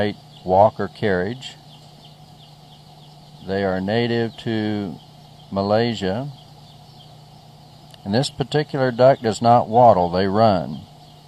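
No technical faults are audible.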